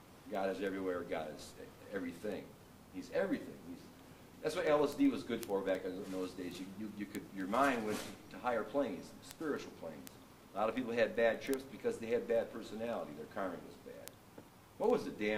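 From 0.16 s to 15.35 s, word clock ticks run throughout: a steady stream of sharp clicks roughly every 0.07 s, about 200 in all. The receiving device's clock drifts by a few hundred ppm from the sender's, slipping one sample at each tick.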